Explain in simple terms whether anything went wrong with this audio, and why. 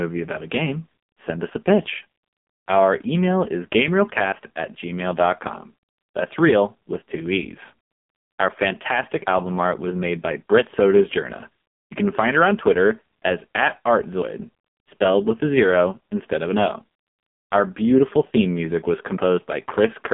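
Yes. The whole recording sounds muffled and buzzy, with a thin, synthetic edge to the speech and nothing above about 3.8 kHz. That is the AMR narrowband mobile codec, the old phone-call format. It squeezes the speech heavily, rebuilding it from a rough model and dropping the crisp high sounds.

At 4.32 s there is a sudden skip where a tiny piece of sound, roughly a twentieth of a second, is missing and the two sides are butted together. This is likely audio missing between chunks: the recorder handled the sound in 5-second pieces and lost a sliver at one changeover.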